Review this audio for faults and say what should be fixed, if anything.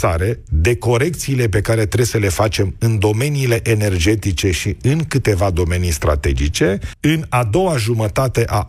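Nothing in this audio needs fixing. No fault can be heard, so no correction or preventive step is called for.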